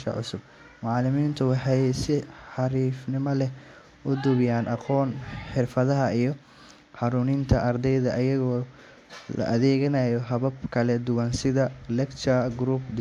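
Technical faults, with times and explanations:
No technical faults can be heard in this recording.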